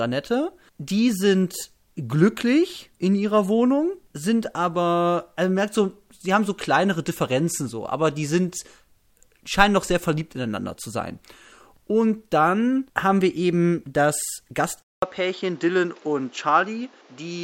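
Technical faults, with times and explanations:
14.82–17.43 s, input likely switched to a poorer device: right after "haben wir eben das" the capture moves to a different, lower-grade input. It leaves a 200 ms silence at the changeover. The new path passes nothing above 7.6 kHz, so the speech loses its top end and turns duller and boxier for the rest of the clip. It also brings its own background noise, roughly 30 dB under the speech, while the overall loudness stays much the same.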